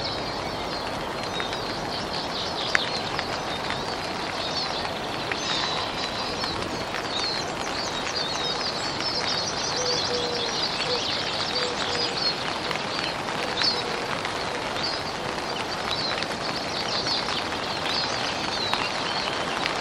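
No technical faults are audible.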